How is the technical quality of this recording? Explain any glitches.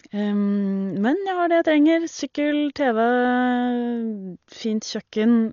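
The technical quality is poor. The damage runs through the whole recording. The speech is band-limited, with nothing above about 6.9 kHz, so it sounds dull and muffled. Rough, fluttering noise clings to the voiced sounds. This is likely Dolby Digital compression at a starved bitrate, consistent with roughly 40 kbps. The encoder cut the upper band and left many frequency lines without mantissa bits, and the decoder filled those gaps with dither noise.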